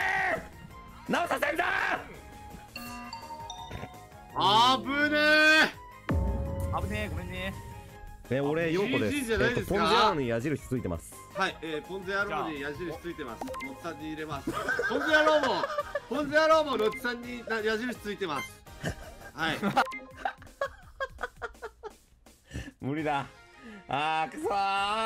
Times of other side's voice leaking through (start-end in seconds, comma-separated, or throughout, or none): none